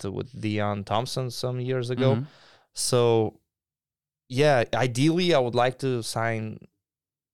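Nothing goes wrong anywhere in this recording; the speech runs along without a single technical hiccup to point out.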